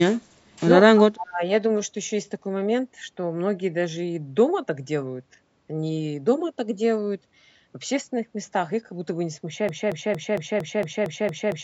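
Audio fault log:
0.94–1.42 s, speech suppressed in double talk: the talker's level plunges by roughly 40 dB for about half a second, the speech dipping and breaking up. Likely an echo canceller, faced with both sides talking at once, could not separate this voice from loudspeaker echo and turned both down.
9.69 s to the end, broken-record loop: a 229 ms fragment repeats identically, back to back, nine times until the clip stops, and the audio that should have played there is lost. This likely reflects a stalled player, encoder or stream resending the last fragment it held.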